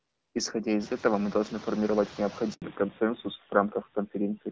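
Throughout the speech, the background noise pumps: it sinks by about 21 dB between phrases and swells back under them, especially after the room noise rises about a second in. These are noise suppressor artifacts from frame-by-frame gain cuts on noise-dominated bands.

From 2.54 to 2.62 s, right after "этого мы должны формировать", the sound drops out completely for 80 ms. This handover gap occurs when the call switches networks and no speech frames arrive until the new link takes over.

From 2.62 s to the end, the speech turns dull and rougher, with nothing above 4 kHz. This fallback to narrowband fits a drop from AMR-WB HD Voice at 12.65 kbit/s to AMR-NB at 7.4 kbit/s, which removes the upper band.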